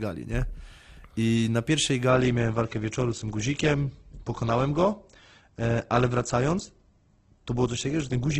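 A speech recording that, at 2.09 s, abruptly turns dull, with nothing above 8.1 kHz and no gap, through to the end. This is an adaptive stream at a lower bitrate, the sudden loss of treble fitting a switch from roughly 64 kbit/s Opus to 12 kbit/s.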